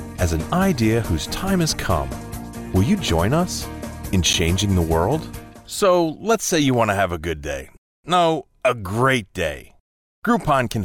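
At 4.33 s there is a gap at a join of encoded pieces. The sound dips out for about 10 ms, then resumes where it stopped. The edges are smeared by the codec. Two separately encoded pieces were joined untrimmed, leaving encoder delay and last-frame padding.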